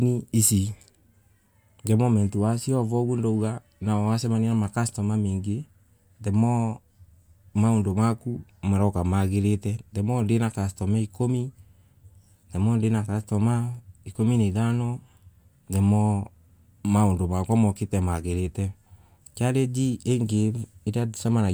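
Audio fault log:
No faults heard anywhere in the speech.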